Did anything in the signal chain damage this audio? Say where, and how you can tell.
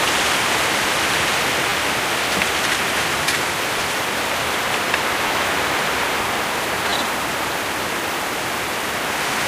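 Yes, a repeated buffer at the driver or buffer stage. Short buzzy stutters occur at 1.70–1.72, 3.79, 5.28–5.30 and 6.90–6.92 s. Each is a hard-joined repeat of one 10 ms slice, which fits a 10 ms buffer replayed when new audio arrived late.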